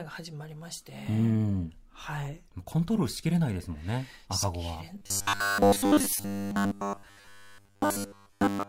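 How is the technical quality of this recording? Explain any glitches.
The second half is degraded by robotic sound from repeated short buffers. From 4.98 to 8.68 s the speech becomes a rigid metallic buzz at 100 Hz. This is likely from a repeated 10 ms buffer replacing all of the real audio.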